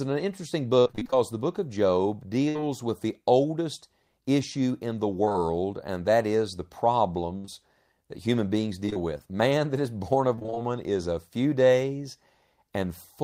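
Choppy stretches of speech at 0.79–1.15 s, 2.49–2.65 s, 5.25–5.40 s, 8.86–8.97 s and 10.35–10.60 s come from repeated packet loss (robotic sound), with gaps of up to 60 ms patched by extending the previous sound. At 7.38–7.46 s a held buzz or fading hiss replaces about 60 ms of audio. This is a burst of packet loss, where the receiver stretched the last sound while turning it down. It runs straight into a brief smear at 7.46–7.50 s, a short concealed packet loss in which 20 ms was filled in before the real speech blended back.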